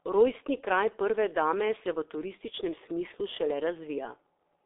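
From start to finish this is G.723.1 codec damage: nothing above 3.7 kHz, heavy hoarse muffling and smeared consonants, fitting a roughly 6.3 kbit/s telephony coder.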